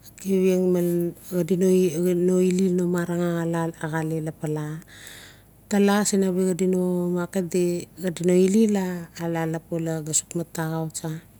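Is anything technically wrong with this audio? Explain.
No, nothing technically wrong stood out on listening to this speech recording.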